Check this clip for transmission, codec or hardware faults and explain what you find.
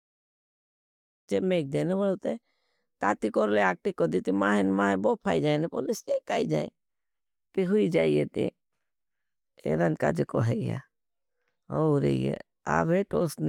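No transmission, codec or hardware faults can be heard in this speech recording. The opening comes in as a smooth fade-in, rising gently to full level by about 1.31 s with no click or hard edge.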